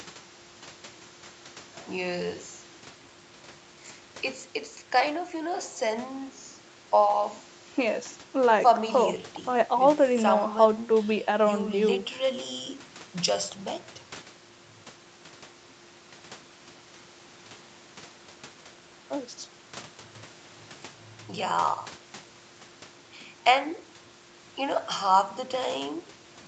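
Nothing in the speech stood out as a technical fault on listening, with the audio top end stopping around 8 kHz as expected from the call path.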